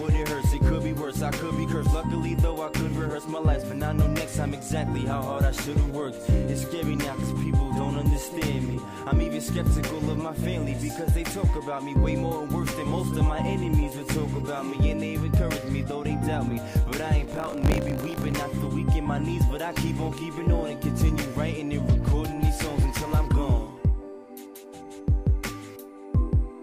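There's a stretch of buffer tearing from about 17.26 to 18.36 s: a gritty, robotic 50 Hz buzz riding on the sound. The writer and playback hardware have slipped, so a small slice of each period replays audio from a lap earlier, roughly 40 ms stale.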